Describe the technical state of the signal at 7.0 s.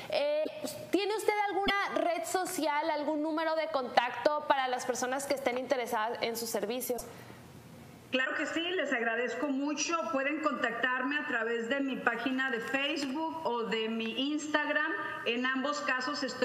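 A broken MP3 bit reservoir is the likely cause: after dropped frames, the next frames reach back for borrowed data that is gone. From 6.96 to 7.01 s the audio skips ahead, leaving a 44 ms glitch that spans under two 26 ms frames.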